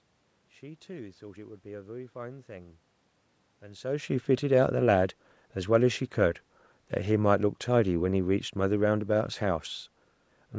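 Speech clip with no technical faults: the call microphone processing trims the lowest bass and leaves nothing above 8 kHz, the room noise belongs to the recording, and the level change around three and a half seconds is the talker moving relative to the microphone.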